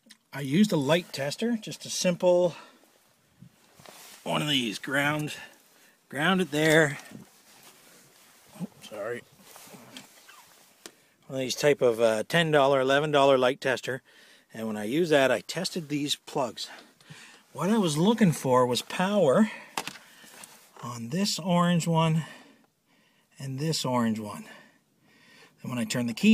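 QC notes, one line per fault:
No faults found on this pass; nothing to log.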